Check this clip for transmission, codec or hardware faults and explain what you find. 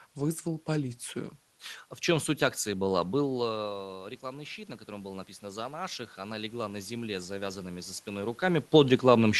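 One fault stands out: automatic gain rising, from 3.59 s to 8.35 s. Around 3 s the talker's level at the microphone falls by about 13 dB, as if they leaned back. The automatic gain control treats the input as too quiet and slowly raises its gain by about 7 dB over nearly five seconds. Because the gain acts on everything, the room noise swells together with the voice, so the background creeps audibly upward instead of staying steady. The call path itself shows a high-frequency limit near 12 kHz, consistent with an Opus call codec.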